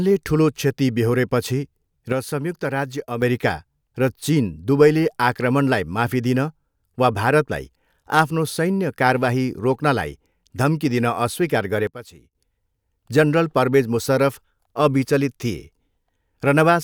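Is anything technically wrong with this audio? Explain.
Yes. This speech has two sudden gain jumps. At 2.12 s, just after "ठुलो क्षति बेहोरेपछि", the level drops by about 6 dB until 3.22 s. At 11.87 s, after "रोक्नलाई धम्की दिन अस्वीकार", it falls about 15 dB until 12.35 s. The likely cause is a digital gain step applied between adjacent samples with no ramp, so voice and background noise shift together. The waveform shows abrupt rectangular steps in envelope, and the spectrogram shows a sharp vertical edge with uniform darkening across all frequencies.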